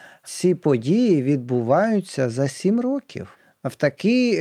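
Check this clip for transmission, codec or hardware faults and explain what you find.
Nothing in the recording points to a transmission, codec or hardware problem; the speech signal holds steady, with no audible disruption or degradation anywhere in it.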